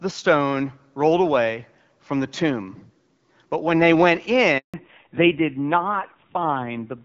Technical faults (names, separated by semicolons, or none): handover gap; fallback to narrowband